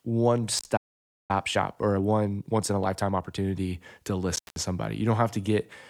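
A speech clip with three kinds of fault. Intermittent contact hits at 0.57 to 0.66 s and again at 4.36 to 4.56 s. Each dropout has crackle at its edges. The line is open for about 58 ms the first time and about 177 ms the second. A loose plug or cable is breaking the circuit. At 0.76 s the speech stops dead for about 0.52 s and resumes at 1.31 s. This is likely a playback stall, where the player starved of data or its thread was blocked. From 1.31 to 3.39 s comes time-compressed catch-up. The speech runs 1.25 times fast at normal pitch. Small pieces are being cut out and cross-faded to clear the backlog.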